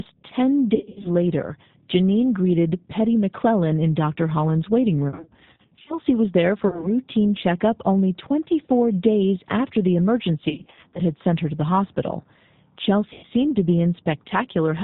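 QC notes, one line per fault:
Throughout, G.729 codec: the speech sounds plainly rough and slightly synthetic and dull, with nothing above 4 kHz. The decoder rebuilds it from a vocal tract filter, a pitch predictor and sparse pulses every 10 ms, which fits an 8 kbit/s coder.
0.75–1.11 s, 5.09–5.95 s (just before "was there"), 6.68–6.90 s (between "was there" and "checkup only"), 10.49–11.00 s, 13.13–13.26 s (just before "to be"), VoIP packet loss concealed by the speech codec: the speech smears into a buzzy tone or coloured noise that fades and stays weak for a moment afterwards. Missing packets, in runs of up to 100 ms, make the decoder stretch its last pitch and filter at falling gain.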